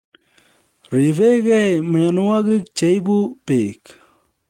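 From 2.05 to 2.66 s, scattered short gaps from about four lost packets, each under roughly 15 ms, were bridged by repeating prior sound, heard as ticks and smears, visible as brief repeated waveform slivers.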